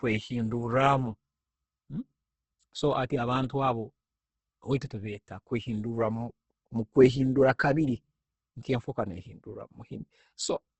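Speech with Opus compression damage throughout: nothing is present above 8.2 kHz, and what remains sounds grainy and rough, with noise-like texture where harmonic detail should be. This is likely heavy low-rate Opus in its music mode, consistent with roughly 12 kbps, filling starved bands with folded or noise content.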